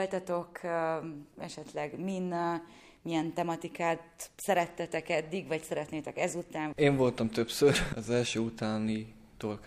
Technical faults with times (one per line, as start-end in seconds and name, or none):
none